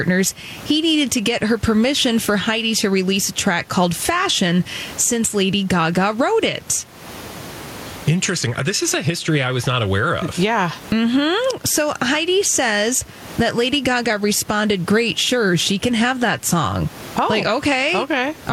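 Speech with gain pumping throughout, the gain swinging roughly 15 dB, likely from gain set far too high with a fast limiter clamping down; the room noise sits about 31 dB below the talking.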